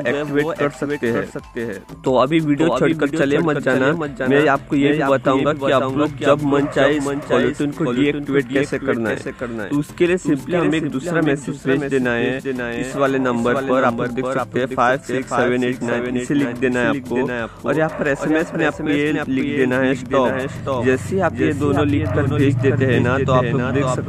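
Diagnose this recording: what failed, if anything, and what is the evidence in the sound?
Doubled audio track, present throughout the recording. Every sound returns as a second, full-band copy about half a second later, only around 5 dB quieter, with no decay or room colouring, so it reads as a duplicate rather than an echo or reverb tail. The stage is capture or editing: the same audio was likely picked up again through a slower second path, or two copies were layered out of alignment, leaving a fixed offset between them.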